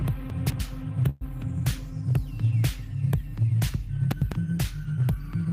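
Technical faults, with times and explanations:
0.3–0.6 s and 4.12–4.32 s, chunks out of order: a 100 ms piece of audio plays late, after the two pieces that should follow it in the first case and after one in the second. The sound jumps forward, then back, then on again, with three hard joins. Unlike a dropout or skip, nothing is missing. The same material is present but jumbled.
1.09–1.24 s, call audio freeze: for about 117 ms the last sound is stretched into a fading buzz or hiss rather than cutting to silence. The audio then resumes exactly where it stopped, so nothing is lost and everything after it runs about 117 ms later. That extra delay separates it from a concealed packet loss. The likely cause is packets held up in transit, leaving the jitter buffer empty until they arrived.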